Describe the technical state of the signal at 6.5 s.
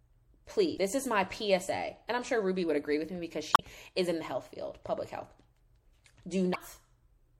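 Damaged data in the compressed stream runs from 6.51 to 6.56 s: the decoder hits corrupted frames, loses sync and hunts for the next valid frame header. The result is a brief disturbance lasting about 50 ms.

Underneath, the whole signal has a watery top end with swirling, metallic sibilance and softened attacks, likely from MP3 compression. The encoder has dropped weak frequency lines, a level of damage that fits a 64 kbps encode.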